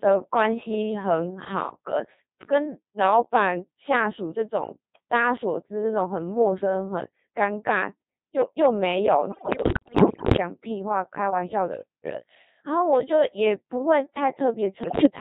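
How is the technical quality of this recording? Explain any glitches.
The technical quality is poor: the speech is carried entirely by a very low-rate vocoder, and it breaks up twice near the end.

Codec 2 vocoder, throughout the whole clip: the decoder does not reproduce the original waveform. It rebuilds the voice from sine waves using only pitch, voicing, energy and a rough spectral envelope, and the heavy coarseness here fits the 2.4 kbit/s mode. The result is a robotic, buzzy voice, and any background sound that isn't the voice comes out mangled.

Bit errors on digital voice radio, from 9.32 to 10.38 s and again from 14.84 to 15.06 s: corrupted bits reached the vocoder. Each bit steers the pitch, level or spectrum of a whole frame, so the damage spreads across entire frames. The first burst sounds like around a fifth of bits flipped, and the second is slightly milder. The voice jumps in pitch and loudness and dissolves into warbles, bleeps and robotic gibberish.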